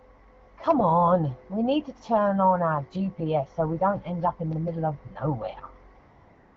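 From 5.99 s to the end of the clip, AMR comfort noise takes over. The sender stopped transmitting speech frames for roughly 0.58 s, and the receiver substitutes a smooth, steady synthetic hiss for the real background. Underneath, the wideband AMR-WB speech sounds clear, consistent with a rate of about 12.65 kbit/s.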